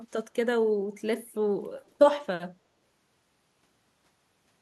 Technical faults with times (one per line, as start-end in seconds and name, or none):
0.18-0.24 echo leak
1.85-1.90 echo leak